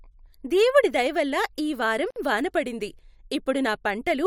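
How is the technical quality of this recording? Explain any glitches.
The recording has one glitch, a gap at a join of encoded pieces. At 2.11 s the speech drops out for about 56 ms, then resumes at 2.16 s. The audio was likely encoded in separate pieces and joined without trimming. Each piece keeps its encoder's start-up delay and its padded final frame. That leftover padding becomes silence inside continuous speech. The edges are smeared by the codec. Afterwards the speech continues exactly where it stopped.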